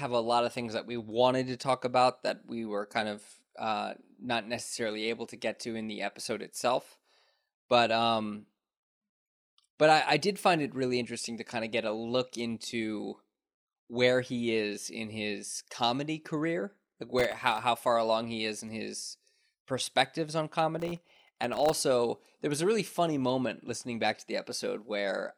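A speech clip with two bursts of processor overload crackle: 17.19 to 17.58 s, after "his comedy career like" and before "how far along he", and a longer stretch from 20.80 to 21.73 s, after "in his perspectives on". Each burst is a rapid run of tiny hard-edged silent gaps, which points to very short buffers, well under a millisecond, repeatedly missing their deadline. The gritty, crackling texture sets it apart from a single clean dropout.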